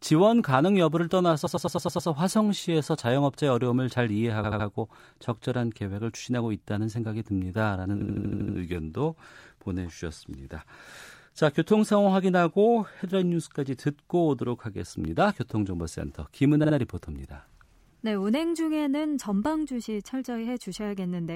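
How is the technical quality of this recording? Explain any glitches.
The recording has a stutter fault in four places. Repeated frames occur at 1.45–2.08 s, 4.43–4.67 s, 8.01–8.56 s and 16.63–16.73 s. A short run of compressed frames was written or sent more than once, so the decoder replays the same slice of speech back to back. The repeated blocks are about 105 ms, 78 ms, 78 ms and 52 ms long, played 6, 3, 7 and 2 extra times. Each is heard as a rapid stutter.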